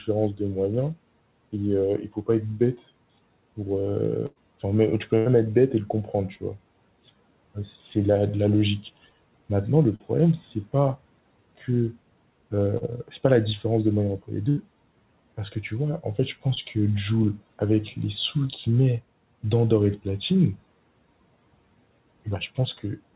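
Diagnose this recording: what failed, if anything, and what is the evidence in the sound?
The network dropped packets, causing bursts of packet loss at 4.26 to 4.38 s, 5.18 to 5.28 s and 14.49 to 14.59 s, losing about 100, 80 and 80 ms. The receiver stretched the last sound and faded it. On a spectrogram, each shows a frozen, dimming pattern, then a jump to later audio.

Short concealed packet loss, also from the network, occurs at 9.96 to 10.02 s, 12.78 to 12.83 s and 16.55 to 16.58 s, each 20 to 40 ms. The decoder briefly extrapolated and crossfaded back, leaving a quick smear or wobble. The waveform shows a smooth, slightly repetitive patch; the spectrogram shows a blurred sliver.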